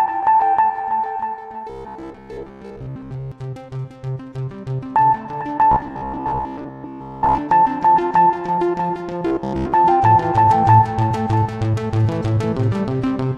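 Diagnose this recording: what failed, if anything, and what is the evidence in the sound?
Robotic sound from repeated short buffers at 1.70–3.32, 5.72–7.39 and 9.26–9.74 s. A rigid 66.7 Hz buzz appears. Likely driver-buffer starvation, looping 15 ms chunks.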